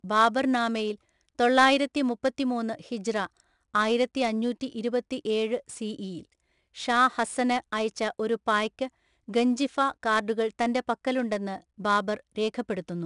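4-bit ADPCM compression runs through the whole speech clip. Each sample is coded as a coarse 4-bit step from a predicted value, and the step size adapts only gradually. The resulting error rides along with the level as a gritty hiss on every louder syllable, plainly audible, with roughness on sharp onsets. Nothing is present above 10.6 kHz, which fits a low sample rate of roughly 22 kHz and gives the speech a dulled top end.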